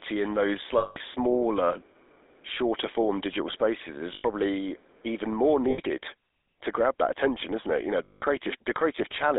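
Right from the start the whole clip of speech carries GSM full-rate codec damage, and it's plainly audible. The voice has that buzzy, gravelly grain you get when a coder models the vocal tract and drives it with a sparse train of pulses, which fits the 13 kbps GSM full-rate codec. On top of that the sound sits in a narrow telephone band, roughly 300 Hz to 3.7 kHz, so it's thin at the bottom and dull at the top.

Then there are four spots of lost GSM frames, where the decoder covered the gap by repeating the last good frame. You hear the sound freeze into a rough, metallic ring instead of moving on. The first runs from 0.78 to 0.97 s, about 180 ms. Shorter ones follow at 4.14 to 4.25 s (100 ms) and 5.70 to 5.80 s (80 ms). The last, at 8.04 to 8.23 s, is another 180 ms.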